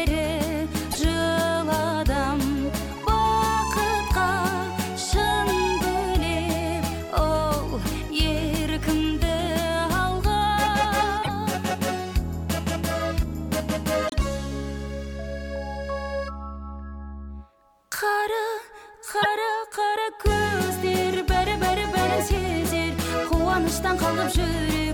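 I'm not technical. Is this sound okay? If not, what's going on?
No. A broken MP3 bit reservoir is the likely cause of brief glitches at 0.90, 11.22, 14.07 and 19.22 seconds. Each lasts a few hundredths of a second, spanning two or three 26-millisecond MP3 frames. Pieces of the file went missing, so the next frames rebuilt themselves from the wrong data.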